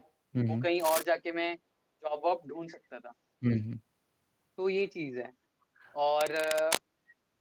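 From 0.0 to 0.1 s a faint delayed copy of the speech trails about 429 ms behind, an echo leak. The likely cause is a far-end loudspeaker whose echo canceller let residual pickup return down the line. It recurs, somewhat stronger, at 2.67 to 2.77 s.

Cable scratch noise covers 0.80 to 1.05 s and again 6.19 to 6.78 s. These are dense, ragged bursts of rustling, nearly as loud as the speech, most likely from a worn cable or connector whose contact resistance fluctuated as it moved.

Between 3.39 and 3.59 s the speech is suppressed in double talk. For roughly a tenth of a second in total it dips sharply, by around 20 dB at worst. The echo canceller likely mistook overlapping talk for echo and attenuated the near-end talker.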